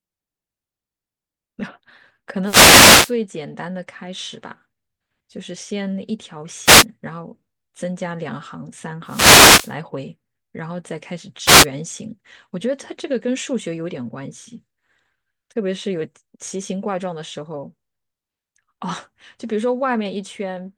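Speech broken by wireless microphone noise hits at 2.44–3.14, 6.64–6.85, 9.05–9.74 and 11.45–11.66 s: brief static swishes as the FM radio link fades, unlike a digital dropout's clean silence.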